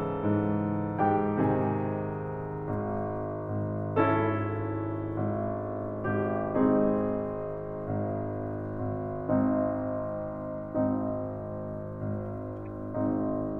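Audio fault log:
12.66 s, corrupt frame decoded: damaged bits in a couple of compressed frames were decoded anyway, misplacing energy in frequency and producing a faint blip near -45 dBFS in the music.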